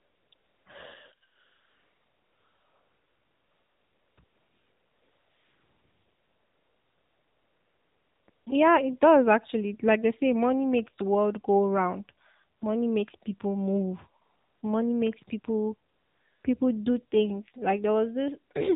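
The whole clip passes through the AMR narrowband mobile codec at 7.4 kbps. Nothing above 4 kHz survives. The speech sounds plainly buzzy and synthetic.

AMR comfort noise fills the gaps when no speech frames arrive: 0.00–0.32 s, 0.34–0.66 s, 1.28–4.18 s, 4.24–8.28 s, 8.30–8.46 s, 12.58–12.62 s, 14.22–14.62 s and 15.90–16.44 s. There, a steady, smooth synthetic hiss replaces the real background and switches in and out.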